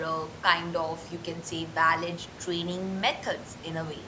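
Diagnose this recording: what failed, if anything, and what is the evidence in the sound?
Nothing failed: the room noise about 14 dB under the speech belongs to the recording space, and the lack of content above 8 kHz is the expected band limit of call microphone processing, not a defect.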